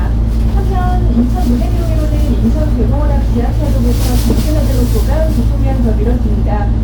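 Hard clipping runs through the whole of these sounds. The signal is driven about 6 dB past what one stage can pass. Only a small fraction of samples exceed the limit, and their peaks are sliced flat. Those flat tops add high harmonics, heard as crackle on the loudest moments.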